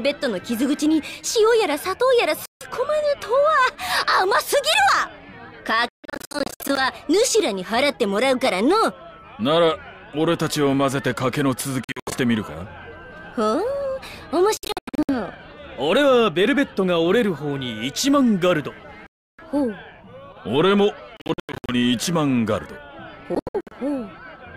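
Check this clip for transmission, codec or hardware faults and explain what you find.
Yes, there are seven short silences, most likely a Bluetooth dropout: packets arrived too late and were discarded. They fall at 2.46–2.66, 5.89–6.79, 11.84–12.16, 14.57–15.10, 19.07–19.42, 21.17–21.75 and 23.35–23.73 s. Several are clusters of brief hard-edged holes rather than one gap. When the sound returns, it has moved on as if it kept playing, which sets these apart from a stall that resumes where it stopped.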